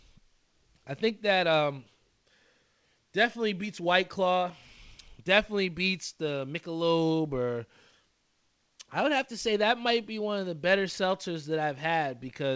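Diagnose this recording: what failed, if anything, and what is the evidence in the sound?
Nothing failed: the speech arrives through a working call path, with the spectrum stopping at 8 kHz, which fits a wideband G.722-style codec running at 64 kbps.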